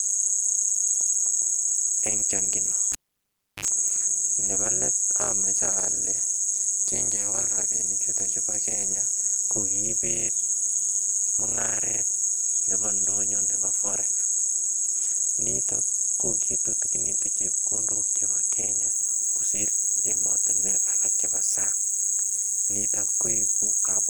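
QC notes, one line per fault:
Throughout: overlap-add ripple. Level dips by about 60 dB once per frame, around 200 Hz, giving a metallic buzz with extra tones around each note. It is a level tremolo, not pitch wobble.
2.92–3.65 s: cable pulled and plugged in. Pop, 0.68 s near-silence, 54 ms of 50 Hz buzz, then a second pop. The buzz separates it from a plain dropout.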